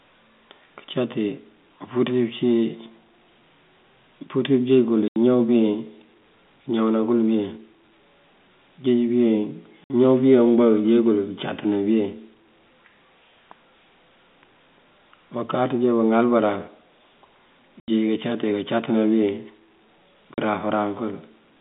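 The speech drops out abruptly four times, at 5.08 s for 80 ms, 9.84 s for 60 ms, 17.8 s for 80 ms and 20.34 s for 40 ms. Each gap is dead silence. This is packet loss filled with silence: the receiver inserted nothing in place of the missing audio. The gap lengths are all multiples of 20 ms, which fits 20 ms packets. The G.711 telephone band, topping out near 3.6 kHz, carries through unchanged.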